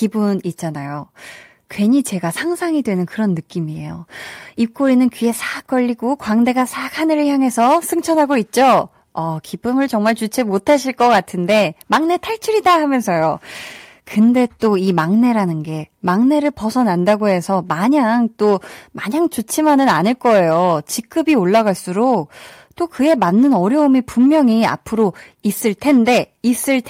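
Hard clipping runs through the whole speech recording. The signal is overdriven by about 10 dB, so around 2% of samples are flattened, giving harsh crackle on louder syllables.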